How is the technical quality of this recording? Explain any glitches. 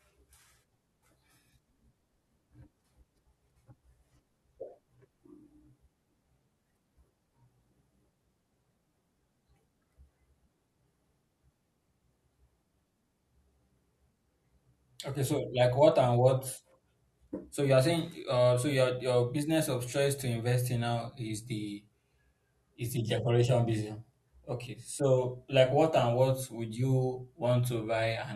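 Nothing in the speech stood out as a technical problem on listening, so there are no glitches to explain.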